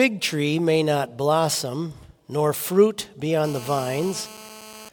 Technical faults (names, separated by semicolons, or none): GSM phone buzz